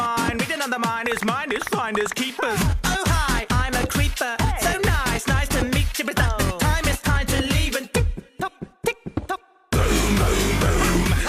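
No technical faults are audible.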